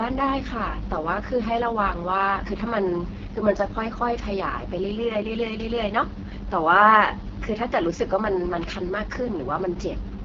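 It's a speech recording run through the AMR wideband (HD Voice) codec from start to finish, and it's been hit hard. The voice comes across rough and raspy, the sort of grit you get when the pulse-based vocal tract model has too few bits to work with, which points to the lowest 6.6 kbit/s mode. The top end stops cold around 7.5 kHz, and the band just under that is noise filled in by the codec rather than real detail.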